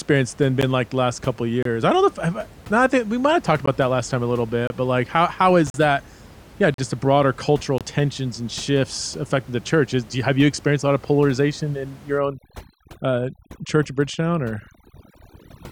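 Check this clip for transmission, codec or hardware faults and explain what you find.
Two faults are present: repeated gaps between stream segments, and overdone noise removal at the end.

Gaps between stream segments occur at 0.61, 1.63, 2.65, 3.66, 4.67, 5.70, 6.74 and 7.78 s. They repeat once per second, matching 1-second segments. Mismatched time stamps leave holes filled with silence. Each is a hard-edged dropout of 6 to 41 ms. One falls just after "last time a little".

Overdone noise removal runs from 12.18 s to the end. The reducer cuts bands near its noise estimate, taking quiet speech with them. The room noise, about 23 dB below speech, becomes twinkling near-silence.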